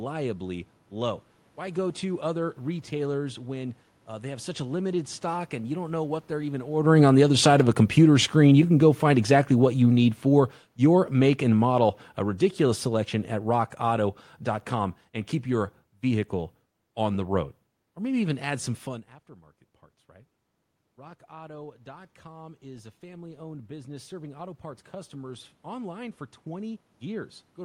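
From 6.73 s, just after "know what they're even", the speech and the room noise behind it sink together, steadily, until 18.35 s, where "add some fun aftermarket" follows at a much lower level. This is automatic gain falling. The talker came closer to the microphone around 6.5 s, the input jumped, and the automatic gain control read it as too loud. It lowered its gain by about 17 dB over several seconds, taking the background down with the voice.

From 20.06 s, right after "some fun aftermarket parts", the opposite happens. Voice and room noise swell together gradually all the way to the end. This is automatic gain rising. Around 19.0 s the talker moved back from the microphone, and the input dropped by about 21 dB. The gain control then climbed slowly to compensate, so the noise floor rises in step with the speech instead of staying put.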